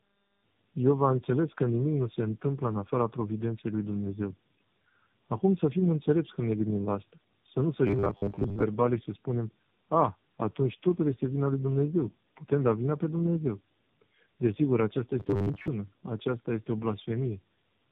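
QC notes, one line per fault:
Throughout: tandem speech coding. The speech has passed through three different speech codecs in a row (iLBC, then G.729A, then AMR-NB, with G.711 links between them), each re-encoding the previous one's already damaged output. The errors compound, so the voice sounds rougher, more muffled and more warbly than any single codec would leave it.
7.87–8.64 s and 15.20–15.68 s: robotic sound from repeated short buffers. In both spans the speech collapses into a rigid metallic buzz at 100 Hz. That pitch points to a 10 ms block being replayed over and over while the real audio is skipped. About half of the first span is repeated material and roughly 70 percent of the second. The likely cause is audio arriving too seldom for playback. Normal speech resumes at "și să spunem a" and "aceasta este o" respectively.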